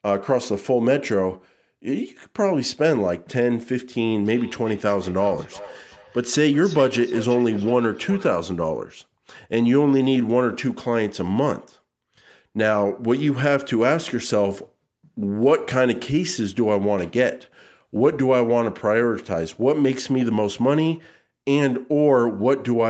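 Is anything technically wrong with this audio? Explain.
Yes. From 4.22 to 8.35 s the speech has feedback echo between two devices: two devices in the same room are on one call, so one plays back what the other's microphone captured, and that microphone picks it up again. Neither echo canceller removes the other device's output. Each phrase returns roughly every 0.4 s, about 18 dB below the speech, thinner and more ringing with each pass. Unlike room reverberation, which smears sound continuously, these are distinct, evenly spaced repeats.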